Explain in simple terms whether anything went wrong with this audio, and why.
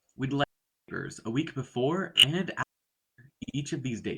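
A digital wireless dropout happened twice: the radio link lost too much data, so the receiver muted, leaving clean near-silent holes from 0.44 to 0.88 s and 2.63 to 3.18 s.

Repeated frames also occur: bits of compressed audio were played again, causing stutters. A 20 ms piece repeats three extra times at 2.16 s, and a 60 ms piece repeats twice more at 3.43 s.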